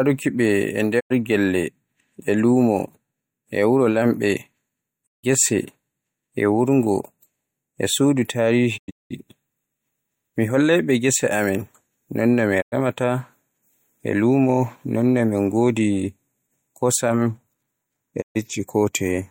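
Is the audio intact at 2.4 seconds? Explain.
Yes, at 2.4 seconds the speech plays through cleanly, with no dropout, click, distortion or other fault to be heard at that moment.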